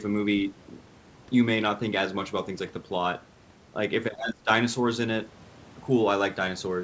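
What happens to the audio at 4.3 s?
Between 4.17 and 4.49 s the speech dips sharply, by roughly 20 dB at its deepest, over about a fifth of a second in total. This is speech suppressed in double talk: with both sides talking, the echo canceller likely couldn't tell the talker from the loudspeaker echo and turned everything down. Inside that dip, from 4.24 to 4.34 s, a brief scrap of the other side's voice leaks through, around 10 dB below the speech, probably echo the canceller failed to remove from the microphone signal.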